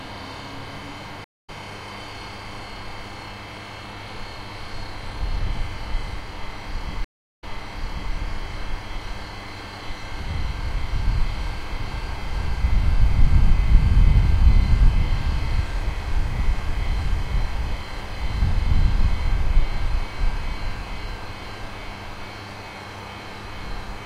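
At 1.24 s the audio drops out for 186 ms, then resumes about a tenth of a second further on: a stream reconnect, where the player lost its connection, went quiet, and restarted decoding mid-stream. A second reconnect at 7.04 s brings 327 ms of silence and a jump back of 758 ms, so that stretch is heard twice. On a waveform each shows a flat gap followed by a brief muted or fading-in onset; the spectrogram shows a blank vertical band.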